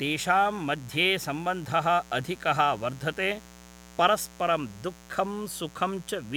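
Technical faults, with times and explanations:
Throughout, mains buzz: sharp switching spikes twice per 60 Hz cycle produce a raspy harmonic buzz reaching several kHz, sitting roughly 25 dB below the speech.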